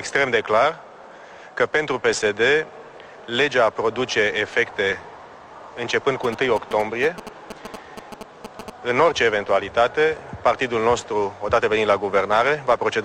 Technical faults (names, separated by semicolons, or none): GSM signalling bursts